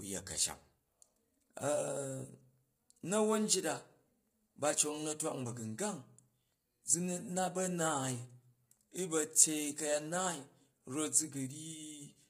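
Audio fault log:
throughout: low-delay AAC compression, likely AAC-ELD, leaves the speech rough and grainy, which fits about 24 kbps. At this low bitrate, coarse coding leaves too few bits for detail, so a spectrogram shows noise filling the gaps between harmonic lines and a smeared, synthetic-looking top band.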